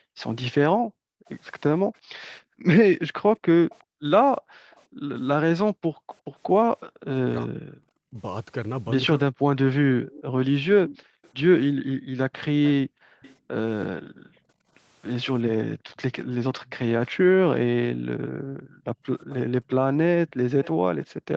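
From 0.0 to 7.09 s, background gated by the echo canceller: the room tone drops by about 40 dB in bursts totalling roughly three seconds, showing as near-empty gaps in the spectrogram's noise floor. Between 3.7 and 6.15 s, a faint echo leak trails the speech by 366 ms, about 30 dB down, and shows as a weak, shifted duplicate of the speech patterns, likely because a loudspeaker's echo escaped cancellation. From 7.44 to 8.18 s, speech is suppressed in double talk, with brief cuts of up to roughly 40 dB totalling a few hundred milliseconds that appear as notches in the waveform. From 9.32 to 19.03 s, gating returns for roughly four seconds in all. The echo recurs at 10.06 to 13.35 s (about 20 dB down), 15.79 to 17.08 s (about 35 dB down) and 19.29 to 21.36 s (about 25 dB down). A final short gating dip falls at 21.1 to 21.23 s.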